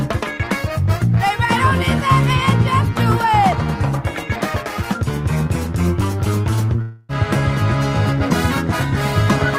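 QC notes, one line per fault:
6.81–7.11 s, long network dropout: sound smears into a fading buzz for 0.27 s, then resumes with 0.28 s gone, likely lost packets concealed.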